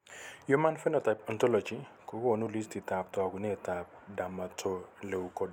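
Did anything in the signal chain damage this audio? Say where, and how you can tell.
No, nothing damaged this audio.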